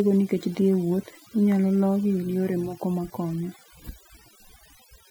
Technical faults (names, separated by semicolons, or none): overdone noise removal